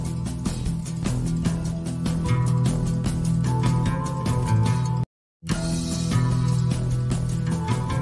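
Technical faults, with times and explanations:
No technical faults can be heard anywhere here.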